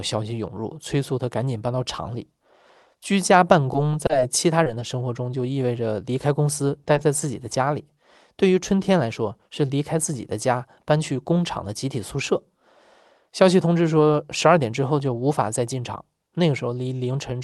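From 3.73 to 4.96 s there's repeated packet loss, and it gives the speech that choppy, robotic quality. Over that stretch there are five holes, the longest about 30 ms. Each time, the receiver papered over the hole by carrying the last bit of sound forward, and then the next dropout came along before things settled. Roughly 8% of that span is concealment rather than real audio, so you get a choppy stutter with little pieces of the speech missing.

Then at 6.84 to 6.88 s and again at 6.94 to 6.98 s there are two quick bursts of short concealed packet loss, each with about 20 ms of audio patched in. The receiver bridged each gap by extending the preceding sound and then blending back into the real signal. Because they're so close together, they come across as a small double smear or wobble, and a brief consonant could easily get swallowed there.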